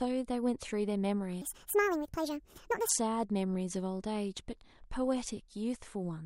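It's a speech clip with a section at the wrong speed from 1.42 to 2.89 s. For that stretch everything runs about 1.56 times too fast, so the speech jumps up roughly seven semitones and sounds hurried and chipmunk-like, then snaps back to normal pitch and pace. Since speed and pitch shift together and the change is abrupt at both ends, the likely cause is that segment being played or resampled against the wrong clock during editing or playback.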